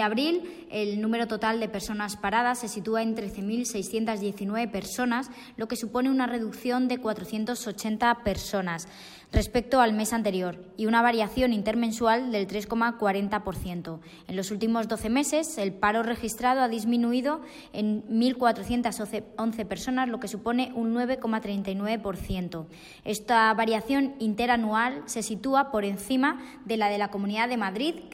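There are no technical faults to describe in this audio.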